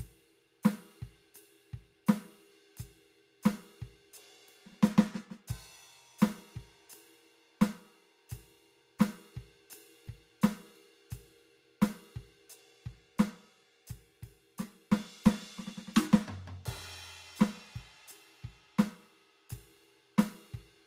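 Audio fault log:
No faults turned up here; the music just rolls along without a hitch anywhere.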